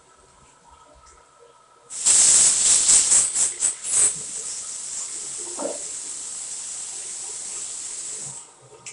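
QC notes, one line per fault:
Throughout, 4-bit ADPCM compression: a gritty hiss rides on every loud passage and swells and fades with the level, because each sample is stored only as a coarse 4-bit step from a prediction, so the error rises and falls with the signal. Sharp attacks get roughed up where the step size can't grow fast enough. Nothing comes through above about 10.6 kHz, which together with the grain fits a roughly 22 kHz sample rate at about 88 kbps.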